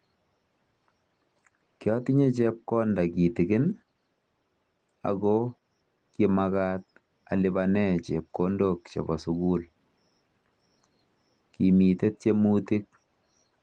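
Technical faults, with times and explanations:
No technical faults in the speech; the Opus voice coding, running at 20 kbps in hybrid mode over the full band, leaves only light traces of compression.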